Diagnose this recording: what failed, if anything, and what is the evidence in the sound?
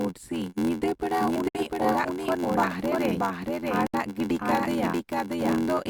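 The speech is repeated by a full-band copy about half a second behind, at about the same loudness, with no decay or room colour. This doubled audio track is likely a second capture through a slower path, or an edit holding two misaligned copies.

A steady 86.1 Hz buzz runs through the whole clip, and the speech is slowed to 0.861 times normal speed at about its normal pitch. This is a block size mismatch (padded) at the driver or buffer stage. Each short block is zero-filled to fit reads of 512 samples.

Hard-edged silent holes interrupt the speech from 1.49 to 1.55 s and from 3.87 to 3.94 s. These are gaps between stream segments at the network or streaming stage. The time stamps of 2-second segments leave about 55 ms and 61 ms unfilled, which the player pads with silence without losing audio.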